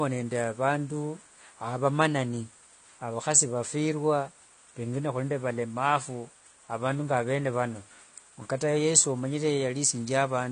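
It's a speech clip with obvious codec damage all the way through, most likely AAC compression. Nothing gets past about 9.8 kHz, so the top end sounds dull and closed in, and the sibilants come out smeared with a fizzy, warbling edge as the encoder drops or fakes the detail it can't afford. That degree of loss fits an AAC-LC encode at a low bitrate, somewhere around 32 kbps.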